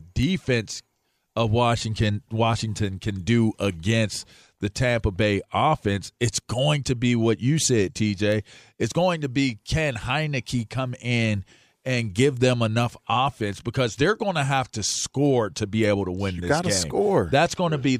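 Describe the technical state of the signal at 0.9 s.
At 0.9 s the signal sits inside a run of word clock ticks lasting from 0.23 s to 17.57 s. The receiving device runs on its own clock, off from the sender's by a few tens of parts per million. Each time the two clocks slip past each other, a single sample is dropped or repeated. In this speech that comes out as sharp ticks about every half second, around thirty in total.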